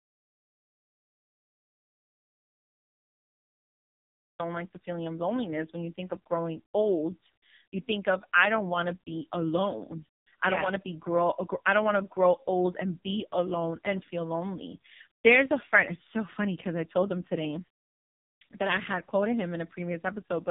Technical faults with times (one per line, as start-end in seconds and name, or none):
0.00-20.51 AMR narrowband mobile codec
0.00-4.39 audio dropout to silence